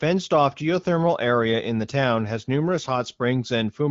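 No technical faults turn up in this speech, which has gone through the AMR wideband (HD Voice) codec at 15.85 kbit/s, and at that rate the coding leaves only light marks on the sound.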